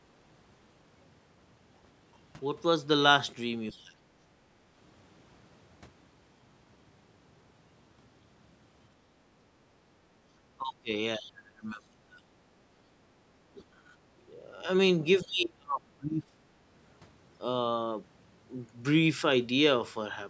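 Speech clip with echo-canceller trouble. From 3.71 to 3.77 s, the other side's voice leaking through can be heard as a faint scrap about 30 dB below the talker, likely loudspeaker echo that the canceller failed to remove from the microphone. Speech suppressed in double talk follows. The talker dips at 3.72–3.91, 10.58–10.91, 11.17–12.15, 13.58–13.93, 14.35–14.61 and 15.23–16.52 s, by roughly 10 dB at the mildest and about 35 dB at the deepest (15.23–16.52 s). This is likely the canceller turning down both sides while they overlap.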